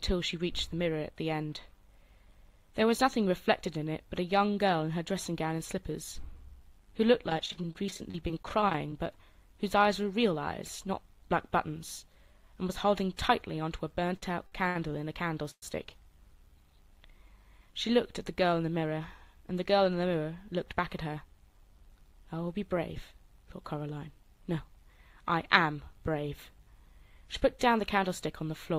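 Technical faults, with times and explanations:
7.28–8.92 s: repeated packet loss (robotic sound). There are 32 short holes, the longest about 29 ms, each patched by extending the preceding sound. Concealment covers 21% of the span and about 270 ms is actually missing, giving a choppy, robotic texture.
9.52–11.66 s: jitter buffer speed-up. The receiver trimmed short pitch-period slices, about 50 ms in total, to drain an overfilled buffer. Playback runs at 102% speed with pitch unchanged. At that rate the hurrying stays below the roughly 105% point where it becomes obvious.
14.17–15.63 s: repeated stalls (stutter). The buffer ran dry four times, the longest wait 118 ms, and each was bridged by continuing the last sound, 294 ms in all. Nothing is lost, but the audio drags and hitches through this stretch.
18.44–19.01 s: jitter buffer speed-up. A stronger burst of pitch-period removal, around 70 ms cut from a short span, pushes playback to 112% speed at the same pitch. 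That is well past the roughly 105% threshold, so this passage sounds noticeably hurried.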